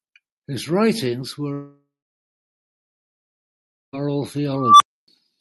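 A speech clip with two separate faults. From 1.53 s to 3.95 s the sound trails off into a fading buzz and then goes quiet for about 2.0 s before resuming, with roughly 2.4 s of audio simply gone. The likely cause is a long network dropout, where packets stopped arriving and the receiver padded the gap with decaying concealment and then silence. Later, from 4.54 s to 5.08 s, a tone around 1 kHz swells to a loud squeal over about 0.26 s, then cuts to about 0.28 s of silence. This is an unstable filter: a recursive filter with bad coefficients fed back on itself until its output clipped and overflowed, and the sound stopped until it reset.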